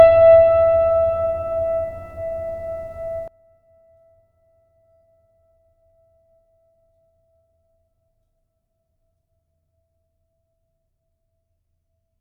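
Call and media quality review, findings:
Music collapses from 3.28 s to the end: centre content drops out, level down about 25 dB, leaving a faint residue. Sounds like one channel inverted, likely a polarity flip on one leg upstream of a mono fold-down, so shared material cancels and only the left/right difference survives.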